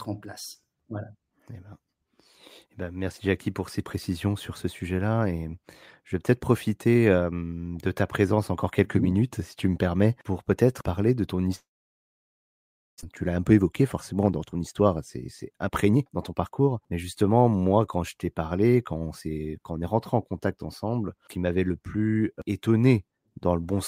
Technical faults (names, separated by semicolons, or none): long network dropout; jitter buffer speed-up